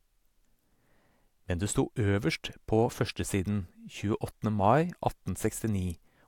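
No technical faults can be heard anywhere in the speech recording; the signal stays continuous and stable throughout.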